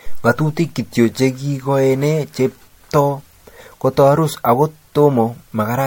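Throughout, the speech is swirly, hollow and smeared, with blurred attacks, more than one encode explains: likely generation loss from about four MP3 passes.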